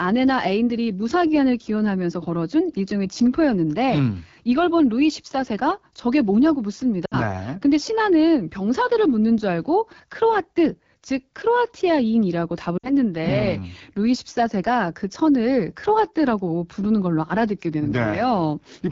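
AMR wideband (HD Voice) codec, throughout: the speech carries the rough, raspy texture of this codec running near the bottom of its range, which fits the 8.85 kbit/s mode. The vocal tract model, driven by sparse pulses, captures the voice only coarsely below 6.4 kHz, and the band above is filled with shaped noise. The damage is plainly audible.

Lost AMR speech frames, from 7.05 to 7.15 s and again from 12.78 to 12.93 s: each time the decoder received no good data for a span that fits three 20 ms frames, about 60 ms of speech. It kept repeating the last valid pitch and vocal tract settings at falling gain. The sound smears briefly and fades before the voice returns weak or rough.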